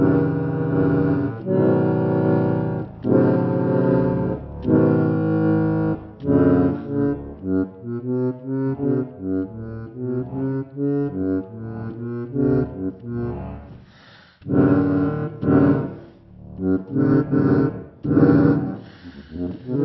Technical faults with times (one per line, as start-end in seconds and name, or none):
0.00-19.84 wrong sample rate